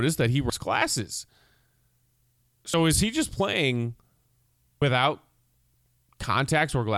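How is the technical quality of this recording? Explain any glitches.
The recording has one recurring problem: compressed frames skipped, three times. At 0.50, 2.74 and 4.82 s the speech jumps forward, losing roughly 150 ms, 70 ms and 200 ms of audio, amounts that fit whole 32 ms frames. Those chunks never reached playback, either missing from the file or rejected by the decoder as corrupt. At each join the speech jumps straight ahead, with part of the flow of speech missing.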